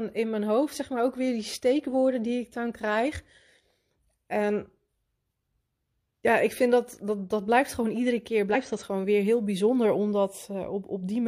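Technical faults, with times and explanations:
8.50–8.56 s, compressed frames skipped: the speech jumps forward by roughly 50 ms, as whole frames of the compressed stream were missing or rejected as damaged by the decoder.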